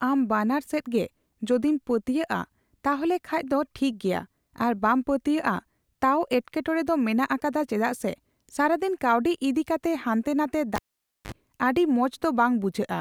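A live cable was pulled out and plugged back in at 10.76 to 11.32 s in this speech recording, so the audio pops, drops to near silence for about 0.51 s, then buzzes with 50 Hz mains hum for roughly 43 ms while only the tip connects, before popping back.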